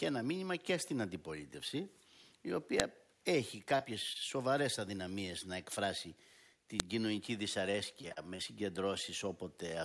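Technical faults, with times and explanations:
2.80 s and 6.80 s: file header played as audio. You get a sharp, loud snap at each point, exactly 4 s apart, because the pieces were joined without stripping their WAV headers, so those few dozen bytes of metadata got played as raw samples.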